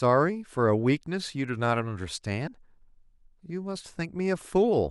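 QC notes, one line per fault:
2.46 s, damaged data in a compressed stream: a brief glitch cuts into the speech. Corrupted bytes made the decoder misread the frames there. It lost sync and resumed at the next valid frame header.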